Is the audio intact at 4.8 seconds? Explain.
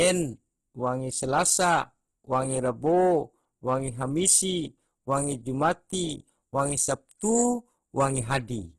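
No. At 4.8 s, as across the whole speech clip, the sound is noisy, rough and grainy, likely from heavy Opus compression at a low bitrate near 12 kbps. Starved bands are refilled with noise, and a spectrogram shows a hard ceiling at 12.4 kHz with smeared, speckled texture beneath.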